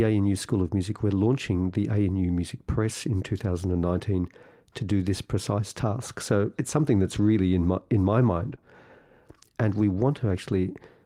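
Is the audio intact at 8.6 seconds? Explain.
No. Just after "in my in my", from 8.35 to 8.53 s, the audio is a lost packet rebuilt from error correction. Missing frames were replaced by a low-bitrate copy carried in the next packet, possibly spanning several packets. That stretch sounds rougher and noisier, with a spectrogram showing grainy, smeared texture instead of a sharp gap.

Right after, from 8.55 to 8.59 s, comes a short concealed packet loss. About 20 ms never arrived, and the decoder extended the preceding sound before blending back. It is heard as a brief smear or wobble ending at about 8.6 s. On a waveform it looks like a continuation of the preceding sound with a soft join.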